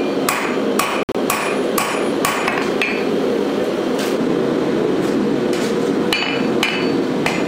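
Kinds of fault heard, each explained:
Bluetooth dropout: Between about 1.03 and 1.15 s the output cuts out in short holes with abrupt or briefly faded edges, totalling about 87 ms of missing sound spread over 116 ms, the longest gap lasting 58 ms. This pattern is likely from audio packets failing to reach the headphones in time and being discarded. The sound resumes further along after each hole, as though it had kept playing, rather than continuing from where it stopped.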